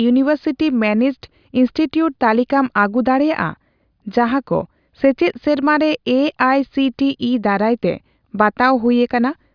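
No technical faults are audible.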